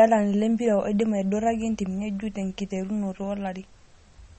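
From the very start to the end, the speech carries plainly audible damage that sounds like MP3 compression, likely from a low-bitrate encode, something around 32 kbps. Nothing comes through above 8.4 kHz, so the top end is sliced off flat and the s sounds lose their air. With so few bits to go round, weaker frequency detail drops in and out between frames, giving the voice that watery, swirly texture and smeared consonant onsets.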